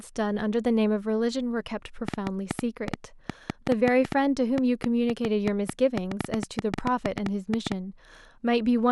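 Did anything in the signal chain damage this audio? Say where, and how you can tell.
Yes: a train of clicks, 2.08 to 7.73 s, irregular at about 6.2 per second, riding well above the speech. That's likely interference pickup in the analogue wiring.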